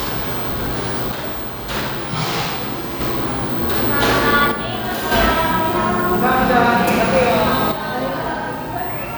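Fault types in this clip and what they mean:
One channel drops out: at 1.12–3.01 s, 4.52–5.12 s and 7.72 s to the end, the level of the sound falls abruptly by about 6 dB, returning after the first two, likely because one stereo channel goes silent, halving the shared content in the mono sum.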